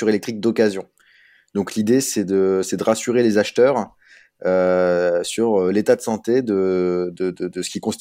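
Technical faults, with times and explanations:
Nothing stood out on listening to this speech recording.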